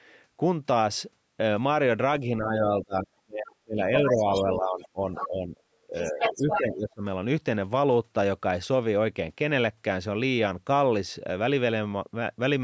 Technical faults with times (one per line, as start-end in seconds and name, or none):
2.20-5.60 speech suppressed in double talk
3.94-4.43 other side's voice leaking through
5.16-5.28 other side's voice leaking through
5.87-7.04 speech suppressed in double talk
5.93-6.61 other side's voice leaking through